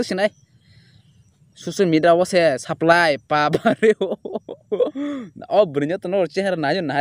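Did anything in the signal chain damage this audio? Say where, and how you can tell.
Yes. A digital gain stage likely switched about 5 dB without a ramp: from 2.69 to 2.93 s, sound and background noise jump up together, then drop back.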